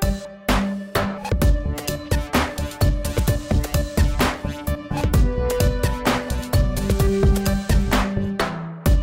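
There are no technical faults to describe in time order in this audio.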